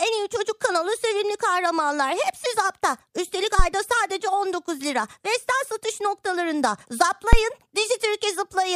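Two phantom power thumps, at 3.59 and 7.33 s, are supply steps through the coupling capacitors. Each shows as a low-frequency waveform spike, peaking about −4 and −1 dBFS, decaying within 15 ms.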